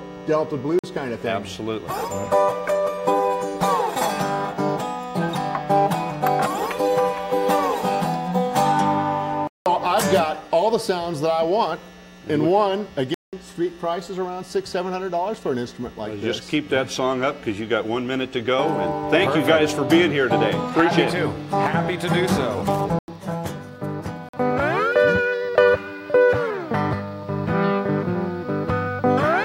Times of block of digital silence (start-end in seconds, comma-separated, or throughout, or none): 0.79-0.84, 9.47-9.66, 13.14-13.33, 22.99-23.08, 24.29-24.33